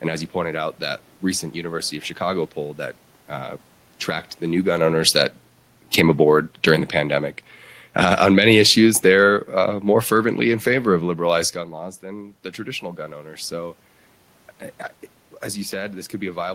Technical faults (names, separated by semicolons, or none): automatic gain falling